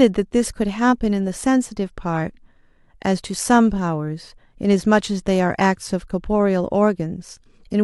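No technical faults can be heard at any point, so there is nothing to describe in time order.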